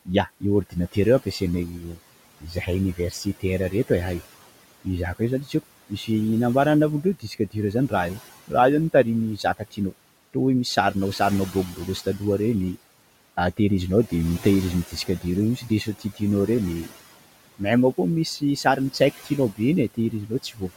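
Noise suppressor artifacts run through the whole recording. The suppressor pulls the room noise, which sits about 18 dB under the speech, down by about 17 dB in the gaps, then lets it back up beneath each phrase. So the background pumps in time with the talking. That gradual rise and fall sets it apart from plain gating, which simply switches the noise on and off cleanly.

Speech cut by the noise suppressor happens in six stretches: 0.05 to 4.21 s, 4.84 to 6.09 s, 7.03 to 7.92 s, 8.48 to 12.21 s, 14.87 to 16.92 s, and 18.4 s to the end. In each stretch, quiet consonants and word endings are mistaken for noise and pushed down by about 14 to 17 dB. They sound swallowed rather than chopped. Altogether this adds up to a couple of seconds, spread in brief moments rather than as solid dropouts.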